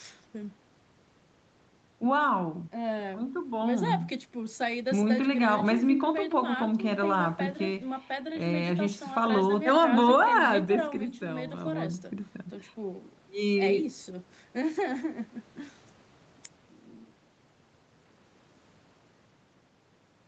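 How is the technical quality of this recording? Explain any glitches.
No glitches are audible in the speech, which carries the expected 8 kHz top end and usual coding texture of a call codec such as Opus at a modest bitrate.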